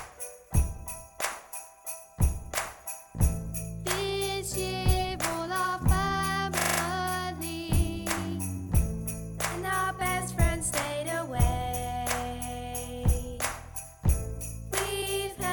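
A system hang loop at 6.6 to 6.8 s: playback froze and the hardware replayed one 40 ms buffer five times, giving a brief 25 Hz buzzing stutter.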